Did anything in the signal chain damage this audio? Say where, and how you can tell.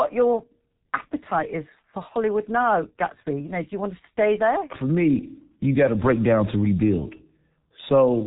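Yes. The speech sounds muffled and hoarse from start to finish, with consonants smeared together and nothing above about 3.8 kHz. This points to the codec stage: G.723.1 codec damage, heavy throughout. The coarseness fits a low-rate setting of around 6.3 kbit/s. The codec rebuilds the voice from a simple model refreshed only every 30 ms, so quick consonant changes blur. Its narrow telephone band removes all upper detail.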